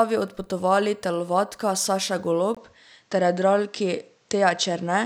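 After a 20 ms gap at 2.55 s, the speech loses everything above 8.3 kHz and gains faint noise, likely an input switched to a poorer device.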